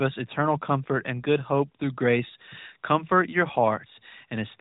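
No technical faults can be heard anywhere in this speech recording. It has gone through the AMR narrowband mobile codec, which removes everything above 3.8 kHz, and the light coding damage fits the codec's highest-quality 12.2 kbps mode.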